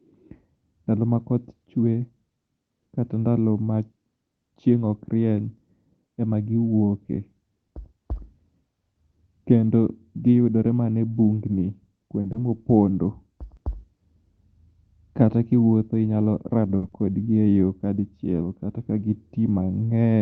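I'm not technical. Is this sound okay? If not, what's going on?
No. There are two brief glitches in this speech, each made of two related problems close together.

At 12.21 s and again at 16.77 s there is a short stall from a late packet. A piece of the call arrived late, so the receiver held the last sound for about 30 ms and then 50 ms. It sounds slightly stretched, with a faint buzz or dip, but nothing is lost.

Just after each stall, at 12.32 s and 16.88 s, comes a short concealed packet loss. Here about 20 ms and then 40 ms of audio never arrived, and the receiver filled the gap with a guess. Unlike the stall, something is actually gone, so you hear a quick smear or wobble and a small sound may drop out.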